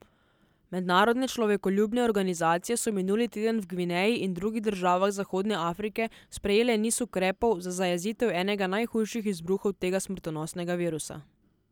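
No technical faults can be heard anywhere in this recording.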